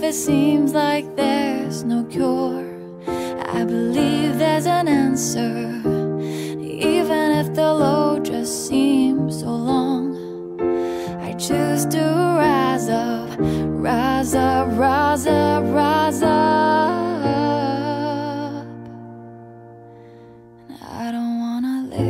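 No technical faults can be heard anywhere in the audio, and the signal stays steady and intact throughout.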